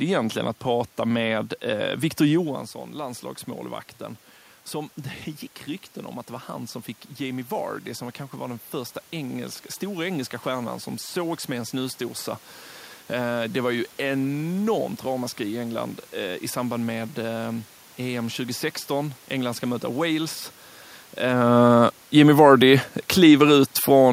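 Automatic gain rising runs from 8.31 to 12.02 s: the gain control judged the input too quiet and lifted its gain by about 4 dB over nearly four seconds, so the speech and the room noise behind it swell together rather than the talker alone getting louder.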